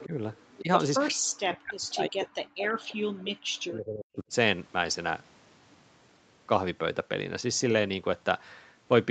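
At 0.00 to 0.06 s a faint delayed copy of the speech is heard, about 20 dB below it and trailing by 350 ms. This is echo leak, likely from a far-end loudspeaker whose echo canceller let part of the sound back through. It returns at 0.49 to 0.61 s, quieter at about 25 dB down, with the same 350 ms lag. Both times it is a brief ghost behind the talker.

Speech suppressed in double talk follows each echo. At 0.05 to 0.13 s and again at 0.61 to 0.70 s the speech dips by roughly 10 dB for about a tenth of a second or less. The likely cause is an echo canceller that could not tell the talker from the returning echo and turned both down. From 1.11 to 4.32 s the same fault is far worse. For around three seconds the speech drops by as much as 40 dB. The whole clip is band-limited to 8 kHz by the call path, which fits Opus at 32 kbps.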